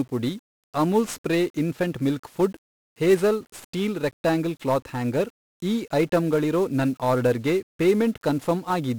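From start to finish the speech carries 1-bit DFPWM compression, heavily damaged. Each sample is reduced to a single up-or-down step that nudges an adaptive level toward the waveform, so the error shows up as dense, grainy noise riding on everything, a crackly fuzz with the treble sunk under hiss, consistent with a stream of about 48 kbps. Unlike added background hiss, the grit tracks the signal, and unlike perceptual codecs there is no warbling or smeared band-limiting.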